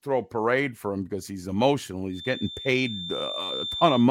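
From 2.08 s, just after "him because he's emotional", a thin, steady whistle at 3.6 kHz sits roughly 10 dB below the speech through to the end. This feedback whistle is likely a loudspeaker-to-microphone loop held right at the edge of instability, sustaining one tone that swells and fades slowly in level.

At 3.18 to 3.21 s, repeated frames produce a brief stutter. The same 23.2 ms stretch plays twice, which fits a single compressed frame being duplicated, and it lengthens the audio by 23.2 ms.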